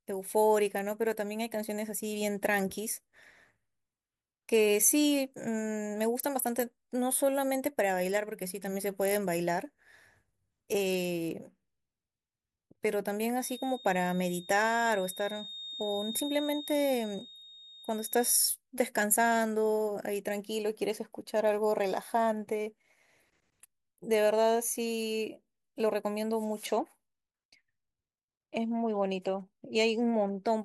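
The speech in this clip picks up a feedback whistle from 13.36 to 18.46 s, most likely because the loudspeaker-to-microphone loop was sitting just at its feedback threshold, with enough gain to sustain one frequency but not enough to make it run away. The result is a thin, steady tone at 3.7 kHz that hangs behind the speech for about five seconds, roughly 15 dB below it, slowly swelling and fading in level rather than building up.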